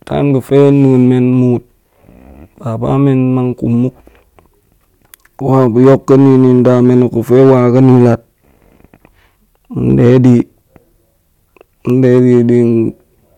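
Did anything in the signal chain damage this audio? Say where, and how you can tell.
Yes. Hard clipping occurs at a gain or conversion stage that ran out of headroom, three times in this speech: 5.53 to 8.13 s overdriven by about 6 dB, 9.90 to 10.40 s by about 4 dB, and 12.04 to 12.57 s by about 2 dB. Peaks exceeding the stage's maximum are sliced flat, and those square corners generate high harmonics. The longest stretch is also the heaviest, and the later ones are milder.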